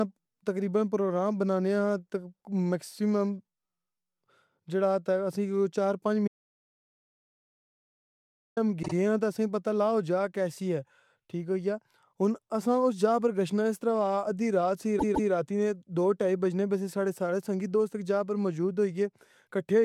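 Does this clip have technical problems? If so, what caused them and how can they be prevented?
Yes. After "چار پنج" there is an audio dropout to silence from 6.28 to 8.57 s. About 2.3 s of speech is lost. The gap is silent with no room tone. The likely cause is a lost input, such as a loose connection, a failing link or an accidental mute, while the recorder kept writing zeros. Securing cables and monitoring input levels while recording prevents this.

There are also repeated frames. From 8.82 to 8.93 s, a 52 ms block plays twice more, adding about 0.10 s. From 14.98 to 15.30 s, between "ادی رات سی" and "راتی نے دو ٹائی", a 157 ms block plays twice more, adding about 0.31 s. Each one is a short stutter. Duplicate compressed frames were written or sent more than once. Checking frame sequence numbers when writing or receiving the stream prevents this.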